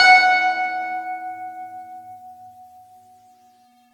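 The music was most likely decoded and re-encoded about ten times through a lossy AAC-LC-style codec, which fits a chain running mostly near 96 kbit/s. This is generation loss. Each pass requantised the signal on a shifted frame grid, so noise and spectral holes piled up across the whole clip. The result is swirly, hollow and smeared, with softened attacks, and nothing above 18.6 kHz.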